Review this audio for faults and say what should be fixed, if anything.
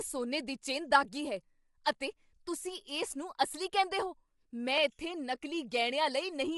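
Throughout, the speech sounds rough and grainy with nothing above 11.6 kHz, likely from low-delay AAC compression squeezing the signal at a rate around 32 kbps. A higher bitrate or less aggressive codec setting would prevent it.

At 1.84 s, just before "ਅਤੇ ਤੁਸੀਂ", a brief hiss precedes the onset: pre-echo, where quantisation noise spreads across a block ahead of the sharp attack. Shorter transform blocks or better transient handling would prevent it.

At 4.78 s, right after "ਅਸਲੀ ਕਹਿੰਦੇ ਹੋ ਮੈਂ", a single sharp click sounds, likely dropped samples, with a fraction of a millisecond missing so the waveform jumps. A more robust buffering path would prevent it.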